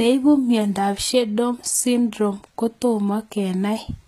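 HE-AAC compression runs throughout this speech, with plainly audible damage: nothing above 14.9 kHz, and the treble is likely rebuilt from copied lower bands at a bitrate around 20 kbps.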